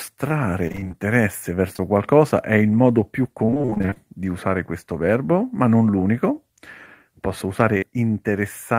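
From 0.67 to 0.95 s, packets kept failing to arrive in time. Seven gaps opened, the longest 25 ms, and the receiver patched each one by extending the sound just before it, so half of that stretch is reconstruction. This repeated packet loss gives the speech a choppy, robotic quality with fragments missing.

Around 1.73 to 1.82 s, two short concealed packet losses fall close together, each leaving about 20 ms undelivered. The first patch also adds a little extra time, and the second spans 1.76 to 1.80 s. The decoder carried the preceding sound forward across both holes, and the speech smears briefly there.

From 3.45 to 3.98 s the repeated packet loss returns over a longer span. Thirteen gaps, the longest 27 ms, are again filled by continuing the last sound, so half the span is synthetic and the speech turns robotic and broken.

Between 7.78 and 7.84 s, a short concealed packet loss leaves about 40 ms missing, filled with 44 ms of continuation. 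It comes through as a brief wobble before the real audio resumes.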